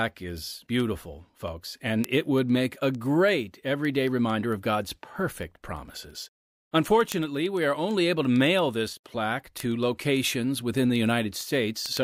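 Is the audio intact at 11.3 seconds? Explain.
No. At 11.3 s the word clock ticks are still running (0.13 to 11.97 s): the receiving device's clock is not locked to the sender's and drifts by around 200 ppm, so one sample is dropped or repeated roughly every 0.1 s, heard as sharp ticks of uneven strength.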